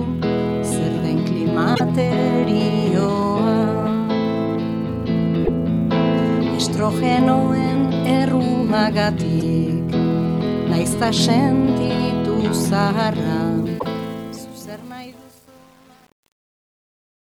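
Damaged data in the compressed stream first disturbs the decoder at 1.71 to 1.81 s: the frames there can't be read correctly, so it loses sync and hunts for the next valid frame header. The result is a short glitch. The same fault returns at 5.40 to 5.49 s with a similar glitch. At 9.40 s it appears only as a brief blip.

From 13.58 s the fade-out runs through a level stage that keeps too few bits and adds no dither. The result fits an 8-bit path, and this is truncation distortion on a fade. While the fade is starting, damaged data strikes once more at 13.76 to 13.85 s and adds another glitch. From about 13.93 s to the end, the waveform coarsens into a few square steps. The tail turns gritty.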